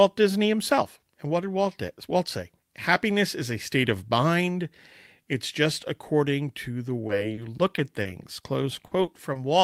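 From 7.07 to 8.07 s, and again from 8.87 to 9.37 s, the speech turns choppy and robotic from repeated packet loss, with short holes of up to 40 ms patched by stretching the last sound.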